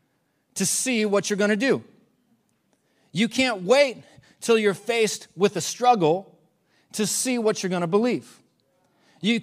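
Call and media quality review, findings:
Call and media quality review findings: no faults found in this speech recording.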